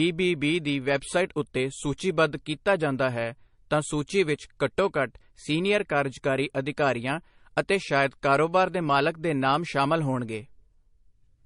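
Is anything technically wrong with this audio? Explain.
Yes. Throughout the speech there is transcoding between lossy codecs, likely MP3 at about 40 kbit/s re-encoded as AAC-LC at about 48 kbit/s. The AAC stage wastes bits on the MP3's smearing and adds its own swirly artefacts, so both textures are heard together. On a spectrogram the content stops abruptly at 10.6 kHz, with patchy, flickering energy below that cut-off.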